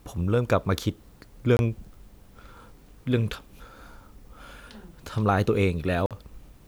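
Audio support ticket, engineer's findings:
Brief silences at 1.57–1.59 s (about 23 ms) and 6.06–6.11 s (about 46 ms), with the speech resuming further on, not where it paused. Likely Bluetooth dropout: packets missing the headphone deadline, with gap lengths that fit one and two lost packets.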